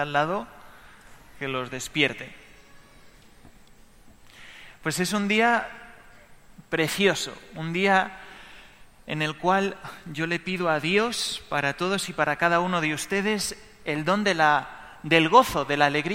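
No technical faults can be heard anywhere in it.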